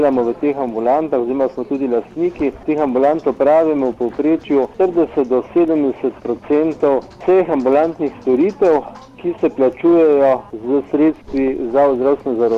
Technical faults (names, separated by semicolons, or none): none